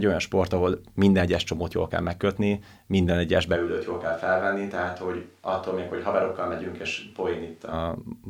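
From 3.57 to 7.72 s, after "kell megkötni minden egyes", speech suddenly turns roomy and bass-light, not merely quieter: likely a switch to a distant microphone.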